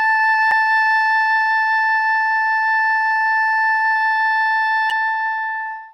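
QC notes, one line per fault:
throughout: MP3 compression, plainly audible; the music sounds watery and swirly with smeared attacks, likely from low-bitrate encoding around 64 kbps.
0.49–0.53 s and 4.87–4.92 s: damaged data in a compressed stream; brief chirp or squawk, as the decoder misreads corrupted frames and resyncs.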